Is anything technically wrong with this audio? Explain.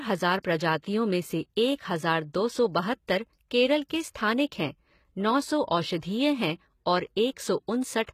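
Yes, there are two faults. Throughout the speech, the sound points to HE-AAC compression at a very low rate, likely around 20 kbps. The codec keeps only the lower spectrum and synthesises the treble by copying lower bands upward under a coarse envelope, so the top end reaches higher but is not genuine. Nothing remains above 14.9 kHz, harmonics fail to line up across the crossover, and the codec damage is plainly audible, with s sounds turning gritty and metallic.

Pre-echo occurs at 0.82 s. A sharp attack lands late in a transform block, and the quantisation noise sized for that loud onset is spread across the whole block, including the quiet moment before it. Here the smear reaches about 16 ms ahead of the attack, so a brief hiss runs in front of it and the onset itself sounds softened rather than crisp.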